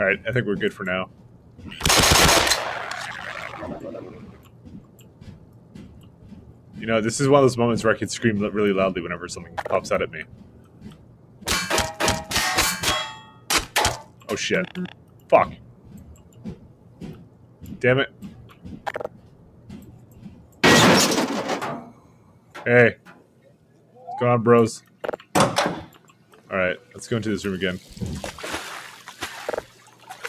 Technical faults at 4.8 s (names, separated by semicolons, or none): noise suppressor applied to music or sounds; sound cut by the noise suppressor